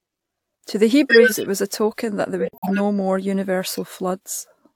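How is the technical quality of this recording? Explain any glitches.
The recording has three damaged-frame glitches, two that play as noise and one dropout.

Corrupt frame decoded, at 1.09 to 1.46 s just before "was a token that", and again at 3.70 to 3.78 s: flipped bits in the compressed frames were decoded anyway, so energy landed at wrong frequencies. The first is a loud burst. The second is a shorter, quieter blip.

Corrupt frame muted, at 2.40 to 2.81 s right after "a token that there": the decoder rejected the damaged frames and the player filled the gap with silence. You get an abrupt 0.41 s hole, long enough to suggest several frames in a row, with the timing afterwards intact.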